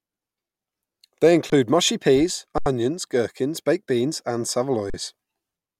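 Speech stops briefly three times, at 1.50 to 1.52 s, at 2.58 to 2.66 s before "gherkins baked beans and", and at 4.90 to 4.94 s after "gherkins baked beans and". Each is an underrun with held sample: the output buffer ran dry and the converter held its last value. The waveform shows flat lines and the spectrogram shows blank vertical gaps. Playback resumes where it paused, so the gaps end with soft clicks.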